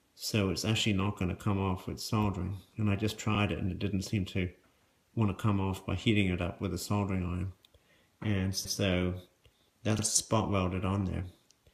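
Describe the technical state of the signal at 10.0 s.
Right around there you get repeated frames, from 9.98 to 10.03 s. A 52 ms chunk of the compressed stream, which fits about two frames, got decoded twice, so that slice plays back-to-back as a quick stutter, and the audio runs 52 ms longer.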